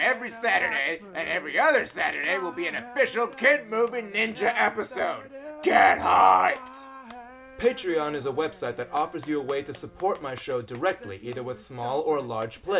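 Nothing technically wrong turns up anywhere in this clip, so there's no fault to point to and no cause to chase down.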